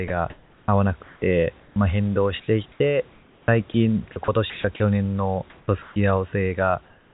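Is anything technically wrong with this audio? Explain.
Yes, the call's voice detector is cutting into this speech clip in three ways.

Sound chopped by the voice detector, 0.08 to 1.76 s and 2.4 to 4.8 s. The sender's voice activity detection likely switched transmission on and off repeatedly within each stretch, so quieter syllables and word edges were not sent and the receiver filled them with synthetic noise. About 740 ms of the first stretch and 800 ms of the second are replaced, so the speech sounds choppy.

Onset clipped by the voice detector, 5.65 to 5.68 s. The detector was likely slow to register that speech had resumed, so the first 30 ms were never sent and comfort noise stands in for them. The word begins abruptly, with no soft start, as if it were switched on mid-sound.

Comfort noise in place of the background, 5.5 to 5.96 s and 6.86 s to the end. During pauses the sender likely stopped transmitting audio, sending only occasional noise descriptions, and the receiver generated smooth, featureless noise roughly matched to the room. 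That replaces about 320 ms and 283 ms of real background. In the final stretch, the background sits about 34 dB below the loud speech, and the synthetic fill is about 2 dB quieter than the real background it replaces, so the ambience thins and drops slightly. Throughout, the narrow band, with nothing above 4 kHz, fits a G.711 telephone codec.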